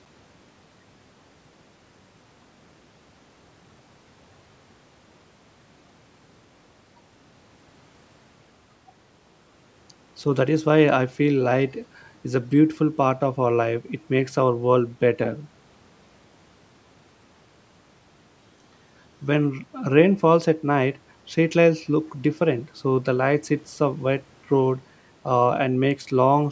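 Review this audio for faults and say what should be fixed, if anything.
Nothing here needs fixing: the speech has simply passed through a call's usual microphone processing, which trims the deepest bass and leaves nothing above 8 kHz, and that is just how such a path behaves.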